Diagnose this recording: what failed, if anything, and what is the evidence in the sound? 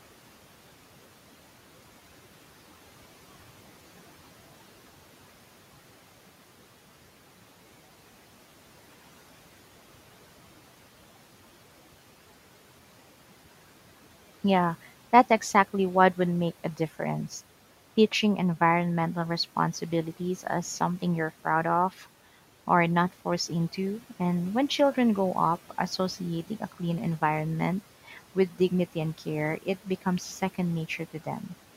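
Call processing misjudged the signal, so speech was cut by the noise suppressor: it classed a brief stretch as background and attenuated it. From 28.08 to 28.18 s, roughly a tenth of a second, the speech dips by about 7 dB, sounding swallowed and faint.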